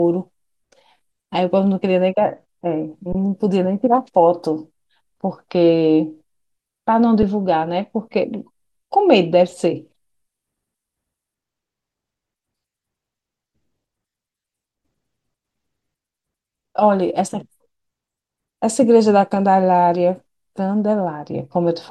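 At 3.13 to 3.15 s, and briefly at 7.23 s, the speech freezes on a flat, held level. These are underruns with held sample. Playback resumes where it stopped, so each ends softly.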